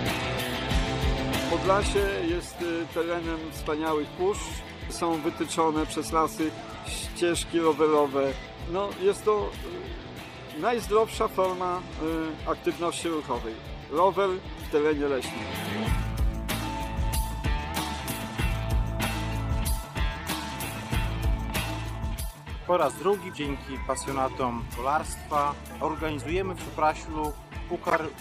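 Brief blips or chirps of misplaced energy break into the sound at 10.09 s, 19.31 s and 21.00 s, with a longer disturbance from 27.90 to 27.99 s. The error in that last event peaks at roughly -10 dBFS, far above the others, which sit near -30 to -45 dBFS. Each is a corrupt frame decoded: flipped bits in compressed frames were played anyway, spreading wrong spectral content across one or a few frames.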